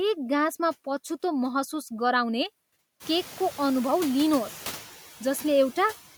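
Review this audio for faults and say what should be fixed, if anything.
Noise suppressor artifacts throughout: steady-noise bands are cut by about 7 dB frame by frame, so the spectrogram's noise floor darkens between phrases and refills under speech. Gentler suppression with slower, smoother gain changes would prevent this, especially once the room noise rises, around 3 s, to about 17 dB below the speech.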